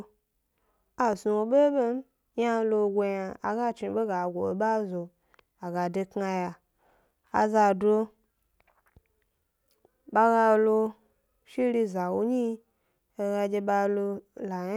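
A speech clip, and nothing is technically wrong with it.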